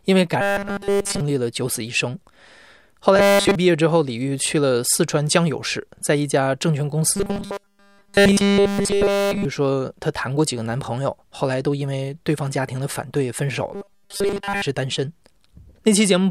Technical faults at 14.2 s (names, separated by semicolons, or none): robotic sound from repeated short buffers